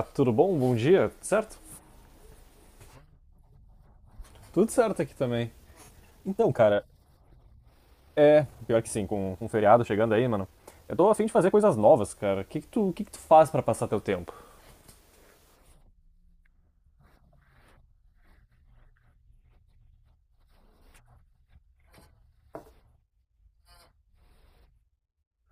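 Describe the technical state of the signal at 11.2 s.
At 11.2 s the speech is inside a time-stretched section running from 5.62 to 12.14 s. Here the pace jumps to 1.4 times normal speed while the pitch stays put. The likely cause is software squeezing this stretch to fit a shorter length. It keeps pitch by cutting out short slices of the waveform and joining the rest. The result sounds rushed.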